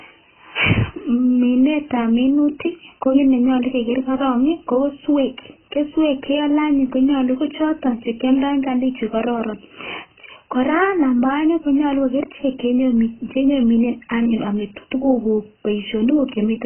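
A speech recording, and the damage runs through the whole clip. Nothing is heard above about 3.1 kHz, so the voice sounds dull and boxed in. Sibilants lose their edge and turn fizzy. Vowels have a warbling, smeared texture. The cause is likely heavy AAC compression, AAC-LC at a very low rate, which fits a bitrate near 12 kbps. The encoder lowers its cut-off and coarsely quantises the remaining bands, leaving gaps and noisy fill.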